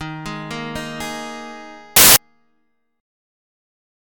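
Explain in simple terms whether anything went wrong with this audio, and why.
From 1.96 to 2.16 s the sound is briefly swamped by a loud burst of harsh hiss. This is samples built from the wrong bytes: each sample's bytes were joined wrongly, so the tiny, fast-changing details became the biggest part of every value, turning into noise.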